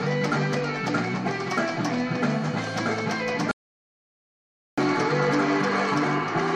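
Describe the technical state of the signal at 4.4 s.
Audio dropout to silence, 3.51 to 4.78 s: the input was likely lost and silence written, so 4.4 s sits inside 1.26 s of dead silence, without room tone.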